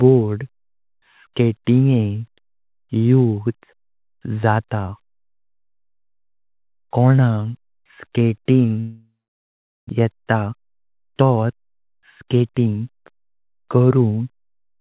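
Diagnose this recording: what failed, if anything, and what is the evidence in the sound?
The network stage likely failed with a long network dropout. From 8.8 s to 9.91 s the speech breaks off. The receiver stretches the last sound into a short fading buzz, then leaves about 0.77 s of silence. Speech resumes with 600 ms of it gone.

A jitter buffer speed-up follows in the receiver's buffer. After the gap it held about half a second more audio than its target. From 9.95 s to 14.49 s it repeatedly cut short pitch-period pieces, so speech in the 4 kHz-limited call band runs 10% fast and sounds hurried at unchanged pitch.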